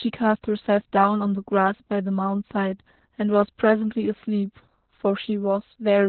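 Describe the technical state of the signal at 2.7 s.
At 2.7 s the speech carries Opus voice compression, which runs through the whole clip rather than starting near that point. The encoder has fallen back to narrowband SILK linear-prediction coding, so nothing is present above about 4.2 kHz, and the excitation is coded coarsely, which fits a bitrate around 8 kbps. The damage is heavy. The speech sounds muffled and telephone-like, with a hoarse, slightly robotic edge.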